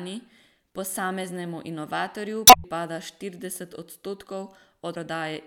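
At 2.44 to 2.65 s and again at 4.91 to 4.97 s, damaged data in the compressed stream makes the decoder misread frames and resynchronise, giving a brief squawk or blip in the speech.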